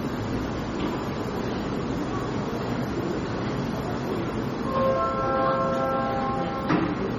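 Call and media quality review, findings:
Whole clip, 0 to 7 s: watery, swirling texture, metallic chirps on bright transients, smeared attacks, no content above 16.5 kHz. Likely MP3 compression, heavy damage consistent with roughly 32 kbps; starved encoder cuts the treble and toggles weak frequency lines frame to frame.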